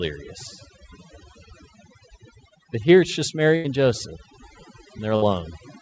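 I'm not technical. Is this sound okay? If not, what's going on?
No. Throughout, the background is turned down and broken up into twinkling specks. That is overdone noise removal: a cleanup tool set too strong switched off narrow slices of sound it mistook for noise, taking quiet parts of the voice with them.

Twice the sound briefly smears into a short, stretched, fading sound: at 3.56 to 3.66 s, just after "here it's just", and at 5.16 to 5.24 s. Each is a burst of packet loss. Pieces of the call were lost or arrived too late, so the receiver stretched the last sound for about 80 ms and then 60 ms, and that much of the speech is gone.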